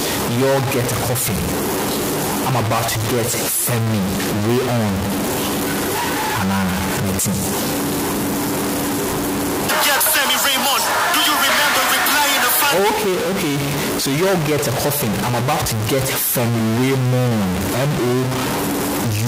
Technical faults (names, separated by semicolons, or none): stuck bit